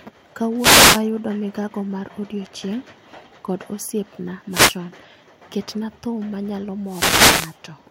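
Wireless microphone noise hits occur at 0.57–1.02 s, 4.50–4.77 s and 6.85–7.57 s. The FM radio link fades, and receiver noise rises as a brief swish of static.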